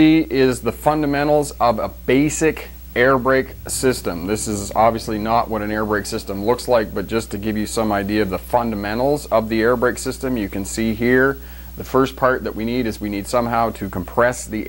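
No technical faults can be heard anywhere in this audio. Nothing in it points to trouble in the chain that recorded or carried it.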